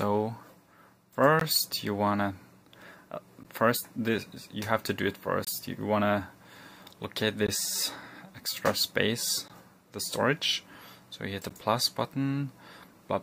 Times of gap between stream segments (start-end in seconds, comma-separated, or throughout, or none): 1.40, 3.43, 5.45-5.47, 7.47, 9.48, 11.49